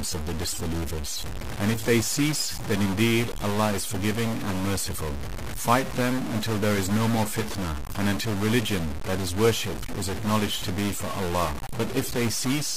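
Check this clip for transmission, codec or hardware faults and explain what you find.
A stuck bit is present from start to finish. The likely cause is one data bit held fixed by a failing line or converter, so about half the samples are offset by a step of roughly -30 dBFS. That gives harsh, buzzy distortion and fills the quiet gaps with noise.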